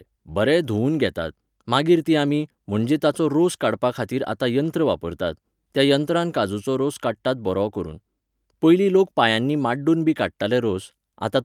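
No technical faults are audible.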